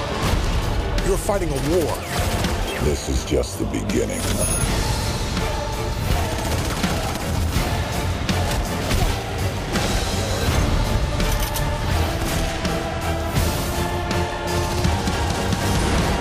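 Crude rate conversion runs from 0.0 to 10.95 s: nearest-sample conversion, consistent with 48 kHz to 44.1 kHz, leaves an inharmonic fizz about 25 dB down tracking loud, bright sound, unlike steady aliasing whistles.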